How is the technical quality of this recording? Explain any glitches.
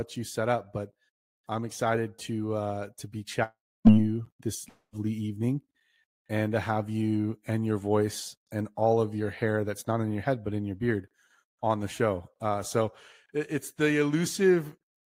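Two glitches. Right after "to uh to be", 3.43 to 3.88 s, the sound trails into a fading buzz, then near-silence; again at 4.69 to 4.95 s. Likely a long network dropout: about 0.42 s and 0.24 s never arrived, so the receiver stretched the last sound, then resumed with those chunks missing.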